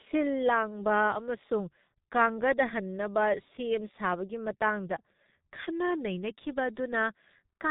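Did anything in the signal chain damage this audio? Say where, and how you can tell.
Yes, at the codec stage: heavy G.723.1 coding throughout, consistent with roughly 6 kbit/s, cuts everything above 3.8 kHz, leaving the speech muffled and hoarse, consonants smeared.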